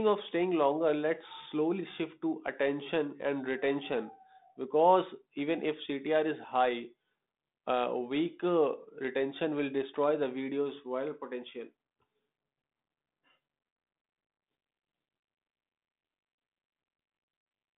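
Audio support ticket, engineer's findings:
Codec payload misread from 14.44 s to end: G.726 code words arriving with bit order reversed relative to decoder's expectation, so each ADPCM difference value is decoded wrongly. Speech from that point buried under harsh, rasping distortion. Underlying 32 kbit/s G.726 path, band-limited to roughly 150 Hz to 3.7 kHz.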